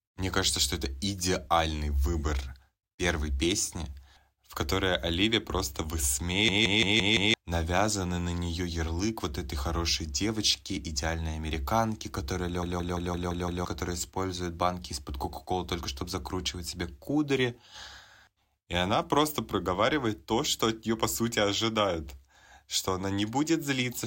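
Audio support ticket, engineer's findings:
System hang loop at 6.49–7.34 s: a 171 ms fragment repeats five times as a machine-gun stutter at about 5.9 Hz before "навязанный на нее ярлык". About a second of audio lost.

System hang loop at 12.63–13.65 s, after "девочки идеальной американки которая": six repeats of the same 171 ms length, resuming at "которая использует банки". Around one second missing.

Mechanism: host or driver stalled while the audio hardware kept replaying its ring buffer. The loop length fits an 8192-sample buffer.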